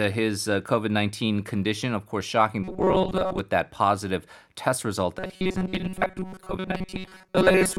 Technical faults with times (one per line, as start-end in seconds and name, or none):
2.63-3.39 robotic sound from repeated short buffers
5.19-7.78 robotic sound from repeated short buffers